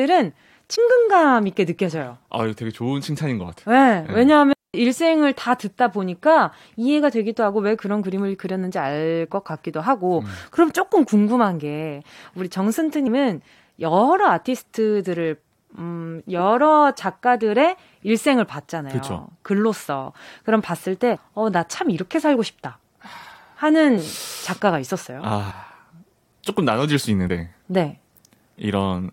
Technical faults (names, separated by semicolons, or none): compressed frames skipped; digital wireless dropout